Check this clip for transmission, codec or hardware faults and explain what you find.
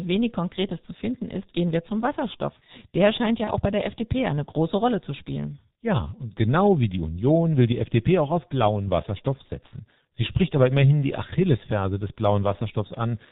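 Two faults are present: a low-rate speech codec shapes the whole clip, and one brief dropout is concealed.

The G.723.1 codec runs throughout, and the damage is heavy. This old telephony coder sends 30 ms frames at a very low rate. The sound fits its 6.3 kbit/s mode. It passes nothing above 4 kHz, so the speech is muffled. Its voice model updates slowly. Fast changes smear as a result. Consonants blur, and the voice sounds hoarse and rough.

VoIP packet loss concealed by the speech codec occurs from 3.44 to 3.53 s, just before "auch bei der". About 30 ms of audio went missing, which points to a single lost frame. The decoder filled the gap by repeating its last pitch and filter while lowering the level. That gives a short buzzy or noisy, faded stretch. Each frame builds on the one before it. The voice therefore stays weak or distorted past the gap, until about 3.53 s.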